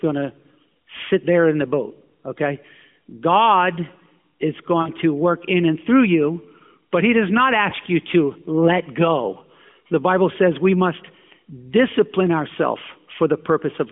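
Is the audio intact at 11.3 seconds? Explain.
Yes, the audio is intact at 11.3 seconds, with the speech carried through the AMR narrowband mobile codec path at the telephone band of 150 Hz to 3.4 kHz.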